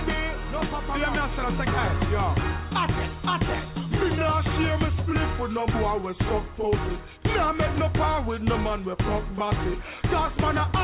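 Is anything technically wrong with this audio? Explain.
No, nothing technically wrong can be heard in this audio.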